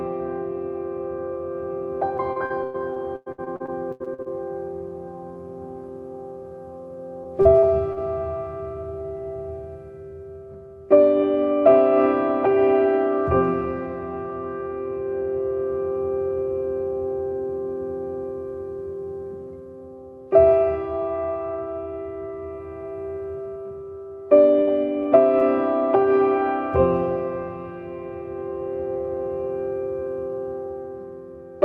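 From 2.17 to 4.28 s the audio turns choppy and robotic: repeated packet loss leaves over a dozen holes, the longest about 100 ms, and roughly 30 percent of the stretch is patched by extending the previous sound. On a spectrogram this shows as smeared, repeating harmonic bands broken by notches. A milder run follows from 7.24 to 7.99 s, with four gaps up to 43 ms and about 15 percent concealed.

At 24.61 to 24.69 s a burst of packet loss removes 60 ms. The receiver stretches the last sound and fades it before the audio jumps ahead. In the waveform this appears as a decaying, overly regular segment, and the spectrogram shows a frozen, fading spectrum.

Short concealed packet loss occurs at 25.03 to 25.07 s and 25.39 to 25.43 s, each losing 20 ms. Synthetic fill bridges each gap and then blends back into the real audio, so each is heard as a quick smear or wobble. Throughout, the call codec's top end stops near 12 kHz.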